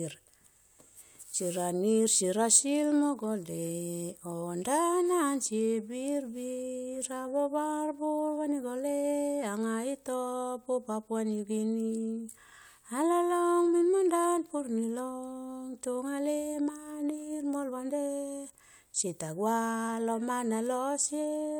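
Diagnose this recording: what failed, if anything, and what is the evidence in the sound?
Nothing failed; no stage of the chain leaves an audible mark anywhere in the speech.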